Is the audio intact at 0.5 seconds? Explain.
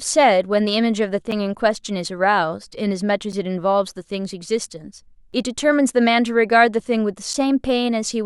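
Yes, the speech is intact at 0.5 seconds, with no fault to be heard at that moment.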